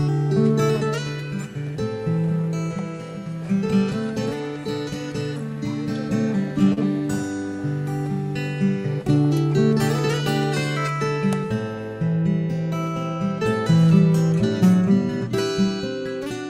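At 6.73 to 6.78 s there is a short concealed packet loss: about 40 ms of audio arrived too late to decode, and roughly 31 ms was synthesised by extending the preceding sound. Instead of a silent gap or click, this produces a brief smeared wobble.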